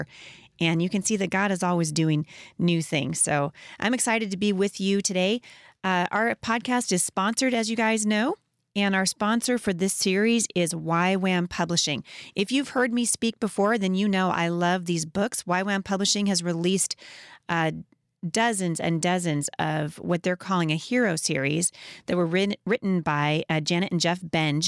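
No faults detected anywhere in the speech recording; nothing to flag.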